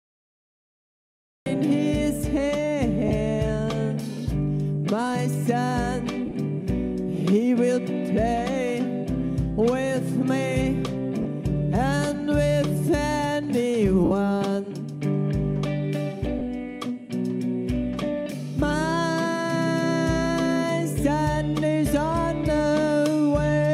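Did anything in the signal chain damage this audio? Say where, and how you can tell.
Yes. The capture or stream began late. The first 1.46 s is digital silence, and the sound then cuts in at 1.46 s partway through, with no attack or fade-in. That hard edge is a cut-off start. Nothing upstream rolled in gently. The recorder or the stream simply wasn't running yet when the sound was already under way, so the audio jumps straight from silence into the middle of the sound.

The second problem is in the Bluetooth LE Audio link. There are lost LE Audio frames at 3.08 s, 6.26 to 6.34 s, 11.22 s, 14.05 to 14.11 s and 16.39 s. Each is a short smeared, noisy patch of about 20 to 60 ms. At 6.26 s the losses are scattered over about 80 ms rather than in one block. When a frame goes missing, the LC3 decoder covers the gap by repeating the last spectrum with random signs, and that is why the sound turns hazy instead of going silent.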